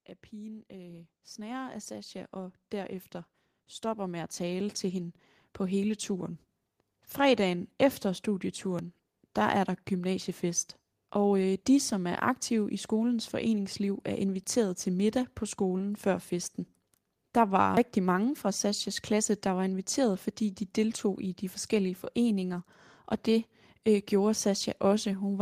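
From 0.3 s to 7.2 s, the level of the speech and its background climbs together by about 17 dB. This is automatic gain rising. The gain control judged the input too quiet and kept raising its gain over those seven seconds.

At 8.79 s, just before "der er der gymnasiefest", the speech jumps ahead. About 20 ms is missing. At 17.77 s, before "mange fra", a larger jump skips roughly 70 ms. There is no gap of silence at either point. The likely cause is a dropped buffer (overrun): samples were overwritten before the software read them, and the two sides were joined directly.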